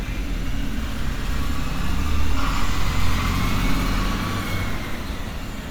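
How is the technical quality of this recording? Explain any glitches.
The technical quality of this recording holds up, with no glitches to explain.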